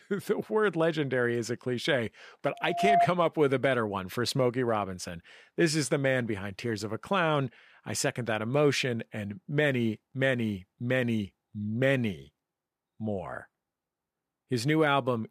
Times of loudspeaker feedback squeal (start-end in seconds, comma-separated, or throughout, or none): 2.54-3.08